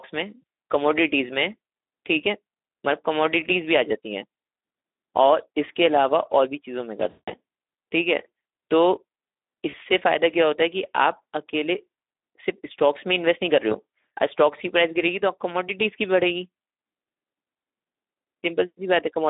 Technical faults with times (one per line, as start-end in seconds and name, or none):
0.00-19.30 Speex codec
0.42 VoIP packet loss concealed by the speech codec
7.09-7.32 VoIP packet loss concealed by the speech codec
9.69-9.79 VoIP packet loss concealed by the speech codec
13.70-13.75 VoIP packet loss concealed by the speech codec